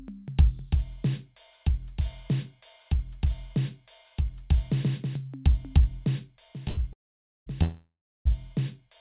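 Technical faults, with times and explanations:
6.68–6.79 s, short stall from a late packet: the music's last sound is held for about 90 ms with a slight buzz or dip, then carries on from the same point with nothing lost. A packet arrived late, the jitter buffer briefly emptied, and the receiver stretched the sound.
6.93–7.48 s and 7.62–8.27 s, call audio freeze: each time the music turns into a fading buzz or hiss, then drops to silence for about 0.51 s and 0.34 s. It resumes where it stopped, so gaps of 0.54 s and 0.63 s are added and nothing is missing. Packets were likely held up in transit, emptying the jitter buffer.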